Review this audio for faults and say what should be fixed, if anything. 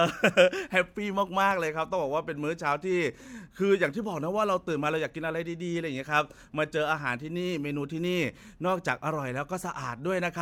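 Nothing needs fixing, as the speech signal holds steady in level and continuity throughout, with no audible technical faults.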